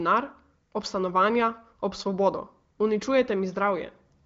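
The speech has the band-limited sound of the AMR wideband (HD Voice) codec, with nothing above about 7.5 kHz and none of the roughness heard at its lowest rates, which points to one of its higher bitrates.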